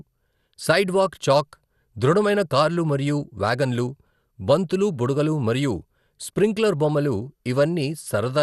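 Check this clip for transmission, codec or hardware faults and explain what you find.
One codec fault runs through the whole speech recording. Throughout, likely MP2 compression starved of bits, in a way that fits a low bitrate near 80 kbps: upper sub-bands are switched off, nothing above 12.1 kHz, and coarse quantisation leaves the speech dull, gurgling and grainy.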